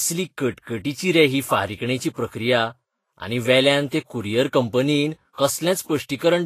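Speech runs with plainly audible codec damage from start to finish, most likely Vorbis compression at a low setting, fitting a bitrate around 32 kbps. Nothing sounds above 14.2 kHz, and the treble beneath that cut-off turns hissy and grainy where fine detail has been replaced by noise of similar energy. That noise-like grain distinguishes it from a plain low-pass filter, which would dull the top without adding hiss.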